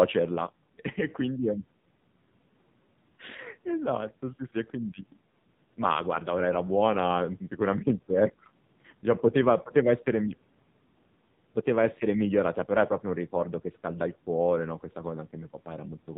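Speech squeezed through the AMR narrowband mobile codec the whole way through, with nothing above 4 kHz and a heavily buzzy, synthetic edge that fits AMR-NB at a low rate around 5.9 kbps. The call microphone processing's bass roll-off is just the usual call chain.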